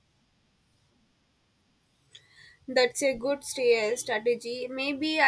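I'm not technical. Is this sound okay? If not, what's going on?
Yes, this one's fine: nothing in the recording drops out, glitches or sounds broken, so there's nothing here to worry about.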